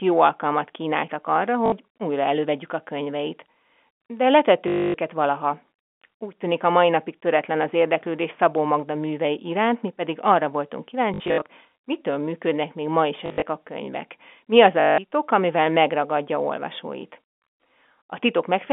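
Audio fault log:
1.66 to 1.72 s, 4.68 to 4.94 s, 11.14 to 11.42 s, 13.26 to 13.42 s, 14.8 to 14.98 s: packet loss with last packet repeated. Lost stretches of 60 to 260 ms, scattered at 11.14 and 13.26 s, are filled by looping the previous chunk. The repeats seldom line up with the pitch, giving a robotic stutter and buzz around 50 Hz, which fits 20 ms packets. Landmarks: after "jó alkalmat kínáltak arra", after "mi pedig arra voltunk", before "amivel megragadja olvasóit".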